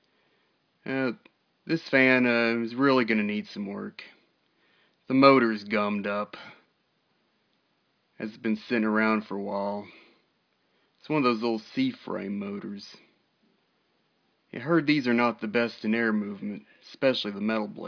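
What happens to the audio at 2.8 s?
Nothing goes wrong at 2.8 s, where the audio plays through intact with no dropout, click or distortion.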